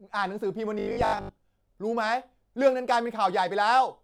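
Robotic sound from repeated short buffers runs from 0.79 to 1.31 s: the speech collapses into a rigid metallic buzz at 50 Hz, still loosely tracking the words. This likely comes from late-arriving audio being covered by looping the last 20 ms, replacing most of that stretch.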